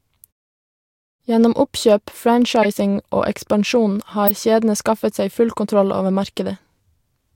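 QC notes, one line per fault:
2.62–2.66 s and 4.27–4.31 s, corrupt frame decoded: two short bursts of wrong-sounding energy, each about 35 ms, cut into the speech as a brief blip or burst of noise. Bit errors inside a compressed frame gave the decoder bad gain values or misread spectral codes, and it played the damaged data as if valid, placing energy at frequencies the speech never had. The first burst spans a single frame. The second is consistent with roughly two consecutive frames.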